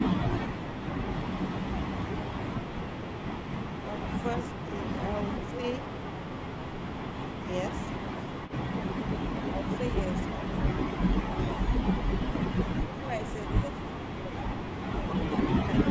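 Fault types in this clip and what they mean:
Echo leak: A faint, delayed copy of the speech slips through briefly at 8.47 to 8.52 s. It trails by 380 ms and sits far below the speech, around 20 dB down. The likely cause is loudspeaker echo that an echo canceller failed to remove.
Speech suppressed in double talk: The speech dips in five short patches between 10.35 and 13.86 s. The drops range from slight to about 15 dB. An echo canceller likely turned the talker down because both sides spoke at once.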